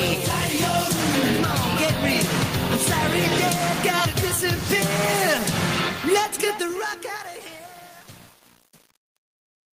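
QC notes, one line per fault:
Throughout: gain pumping. Loud and soft parts sit close in level and the sound is squashed, the gain swinging around 20 dB, likely from a fast limiter fighting excessive input gain.
5.79–9.77 s: truncation distortion on a fade. The fade-out's quiet tail turns gritty, worst from 6.85 s onward, because the fade stage keeps too few bits without dither, consistent with 10-bit steps.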